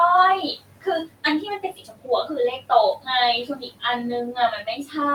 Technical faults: noise suppressor artifacts; speech cut by the noise suppressor

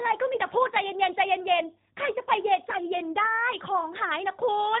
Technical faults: G.729 codec

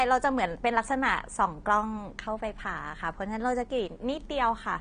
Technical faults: AAC compression

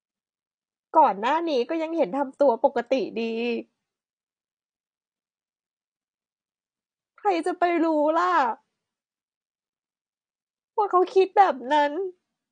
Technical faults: AAC compression

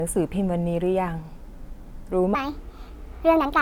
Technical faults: section at the wrong speed

